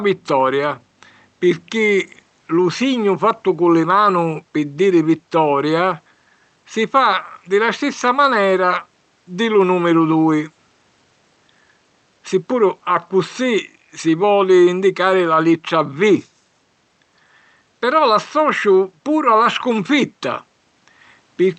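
Nothing in this recording sounds technically faulty.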